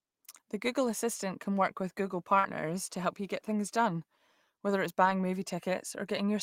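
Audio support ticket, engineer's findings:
Short concealed packet loss, 2.39 to 2.46 s, just before "to help you get". About 40 ms of audio missed the jitter buffer; the decoder's concealment extended the preceding speech, then crossfaded back. Audible as a brief smear or wobble where the sound is held artificially.

Lost packet rebuilt from error correction, two events. First, 2.44 to 2.46 s, tail of the concealed stretch above: the final 20 ms was recovered from the following packet's Opus in-band FEC copy, so rougher and noisier texture there rather than further smearing. Second, 5.06 to 5.12 s, right after "things done whether it's": 40 ms rebuilt from low-bitrate redundant copies, which fits two separate lost packets. No gap, but a short grainy, noisy patch in the speech.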